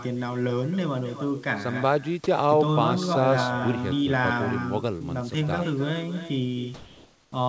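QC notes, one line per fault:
Throughout: echo with no canceller. The talker's voice is shadowed by a quieter, thinner copy arriving about a third of a second late and about 11 dB down. The far end's loudspeaker is feeding its mic and nothing's removing it, so you hear yourself after the network round trip.
4.98 to 5.02 s: short concealed packet loss. About 20 ms of audio didn't arrive in time, and the decoder papered over it with about 24 ms of extrapolated sound before blending back in. That's why there's a tiny smear or wobble right there.
6.74 to 7.32 s: comfort noise in place of the background. For 580 ms the real room background, which sits about 34 dB below the loud parts, turns into a flat, featureless hiss, only about 1 dB quieter. Likely the sender's voice detector stopped transmission during the pause and the receiver filled in synthetic noise.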